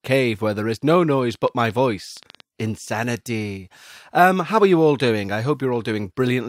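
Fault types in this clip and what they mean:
Train of clicks: about ten unevenly spaced pops, roughly 7.6 per second from 1.35 to 2.41 s, as loud as the speech, likely interference or a faulty connection.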